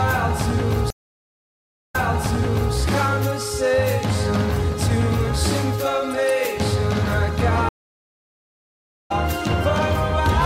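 At 0.90 s a stream reconnect drops the audio for 985 ms, and playback resumes 0.86 s earlier, repeating material. At 7.69 s a second reconnect leaves 1.36 s of silence, resuming about a second later and skipping ahead.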